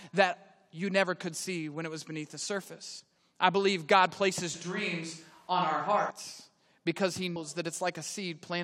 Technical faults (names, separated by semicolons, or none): damaged data in a compressed stream; switch to a distant microphone